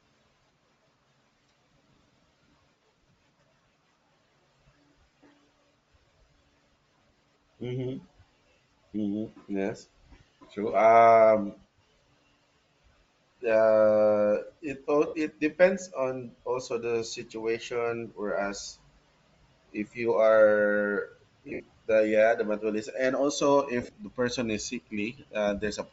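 Throughout the speech there is a breathy, grainy edge, likely from Bluetooth LC3 compression at a low bitrate, around 32 kbps. The codec discards much of the upper spectrum and fills it with noise, so a spectrogram shows smeared, speckled high bands.

Lost LE Audio frames occur at 15.07–15.14 s (a 60 ms gap), 21.49–21.60 s (scattered over 105 ms, longest run around 70 ms) and 23.82–23.97 s (scattered over 150 ms). The decoder repeats the last spectrum with random phase, producing a hissy smear that shows as blurred vertical patches in the spectrogram.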